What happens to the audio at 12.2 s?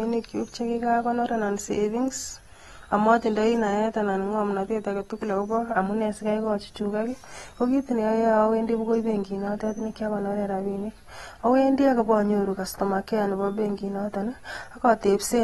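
At 12.2 s the speech carries AAC compression that runs through the whole clip, likely AAC-LC at a rate that fits 32 kbps. Coarse spectral quantisation removes everything above 12.4 kHz, leaving a dull, smeared sound with a warbling, fizzy edge.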